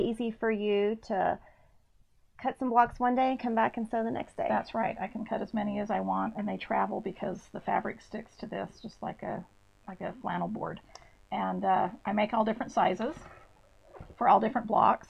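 From 3.16 s to the end, mains buzz sits about 35 dB below the signal. Switching spikes twice per 50 Hz cycle spread harmonics into a steady, raspy buzz.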